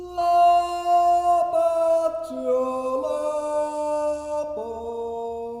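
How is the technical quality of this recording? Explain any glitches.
One glitch stands out: a single sharp click at 0.69 s. That is dropped samples: a handful of samples, likely lost from the stream, so the waveform jumps abruptly to a later value. The gap is far too short to remove any sound and shows as a thin vertical line across the spectrum.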